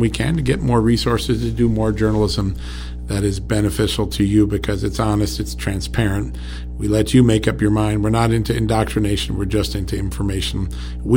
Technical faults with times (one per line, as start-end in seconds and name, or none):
0.00-11.16 mains hum